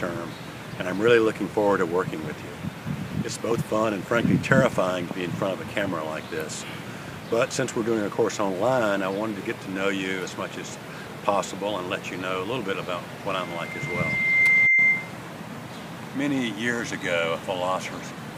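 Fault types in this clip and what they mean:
Loudspeaker feedback squeal: a single tone near 2.1 kHz swells over roughly a second into a piercing squeal from 13.31 to 15.18 s, ending up about 10 dB above the sound. A microphone is hearing its own loudspeaker, and the loop gain at that frequency exceeds one.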